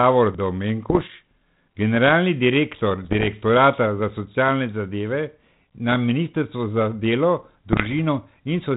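Short bursts of popping, rough crackle with brief jumps in level interrupt this speech three times: 0.89 to 1.10 s, 3.05 to 3.31 s just after "generalni direktor", and 7.71 to 7.95 s after "na ministrstvu za delo". These are bit errors on an ADPCM link. The first burst is the harshest, at around one error per hundred bits, and the later two are lighter. Each flipped bit knocks the decoder's step size and prediction off track, so the damage rings on briefly instead of staying a single click. The band-limited G.726 coding, which fits 32 kbit/s, has only light, faint roughness.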